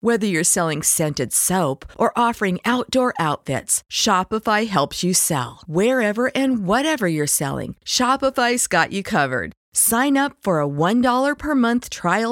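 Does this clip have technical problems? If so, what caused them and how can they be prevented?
No, this recording has no technical problems to address.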